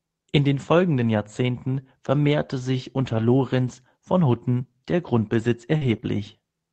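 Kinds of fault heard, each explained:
Scattered short gaps: Between about 0.97 and 6.18 s the speech stays clear but is marked by a few brief ticks and small smears, around three of them, none longer than about 40 ms. Roughly 80 ms of audio never arrived in time, so the receiver bridged each hole by stretching the sound just before it. That continuation covers only about 1% of the stretch, which is why the glitches register as hiccups rather than dropouts.
Sample clock jitter: From about 3.29 to 4.79 s a faint grainy hiss rides on the speech. It is strongest on loud and bright sounds and disappears in the pauses. The converter's timing wanders by roughly half a microsecond, so each sample lands slightly early or late. Steep, fast-changing parts of the waveform turn that timing error into a larger amplitude error, leaving noise about 60 dB below the signal.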